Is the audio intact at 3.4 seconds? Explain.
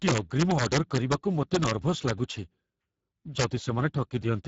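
No. Between 3.40 and 3.44 s there's an integer overflow. Loud peaks, pushed about 4 dB past the ceiling, wrapped around to the opposite sign instead of being limited, so each one flips across the full range. You get violent cracks, much sharper than ordinary clipping.

On top of that, the whole clip, that moment included, carries plainly audible Speex codec damage. The speech sounds noisy and hoarse, and the sound points to a low setting of around 10 kbps. Above 4 kHz there's only a shaped, noise-like fill, with nothing above 7.7 kHz.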